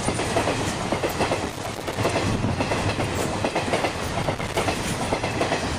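The audio has two bursts of loose connector crackle. The first runs from 1.45 to 2.05 s and the second from 4.23 to 4.58 s. Each is an irregular, scratchy crackle. A worn or dirty contact is making and breaking, chopping the signal.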